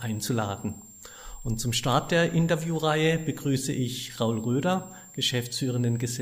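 Switching supply whistle runs from start to finish: a power supply's converter is cycling at an audible rate, leaking a thin high whistle that wanders between about 7.2 and 7.7 kHz, sitting roughly 25 dB below the wanted sound as its load shifts.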